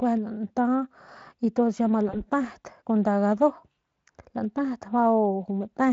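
At 2.09 s, after "y tuns ya ma", VoIP packet loss concealed by the speech codec sets in. About 40 ms is lost, fitting two 20 ms frames. The decoder extends its last pitch with falling gain. The sound smears into a fading buzz or coloured noise until 2.23 s.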